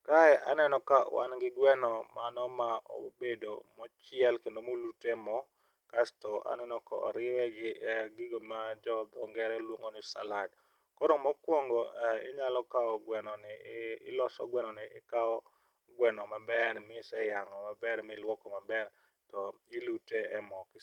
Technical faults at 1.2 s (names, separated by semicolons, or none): clock drift between sender and receiver; repeated timing corrections